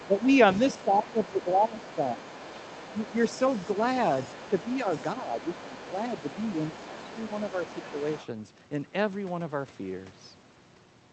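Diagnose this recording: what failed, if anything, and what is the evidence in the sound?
A second, fainter voice runs underneath the speech from the start until 8.27 s, roughly 20 dB below the main talker. This is the other side's voice leaking through, likely residual echo that the call processing's canceller failed to subtract from the microphone.

The main speech dips at 0.08–0.19 s, 0.77–2.27 s, 5.21–5.8 s, 6.88–7.04 s and 7.54–7.63 s, by a few dB up to around 15 dB in the longest stretch. That is speech suppressed in double talk, likely the echo canceller turning everything down while both sides overlapped.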